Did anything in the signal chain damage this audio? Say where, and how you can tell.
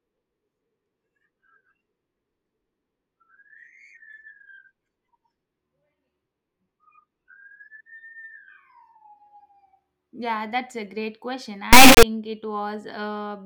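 Yes. Right after "that's a great question", from 11.73 s to 12.03 s, the speech turns into a harsh, extremely loud buzzing square wave for about 0.3 s. That is an integer read as float error at the sample-format conversion stage. The pattern points to 32-bit integer samples being interpreted as 32-bit float. The reinterpreted bit patterns become values near zero or far beyond full scale, so the output slams between silence and the clipping limit.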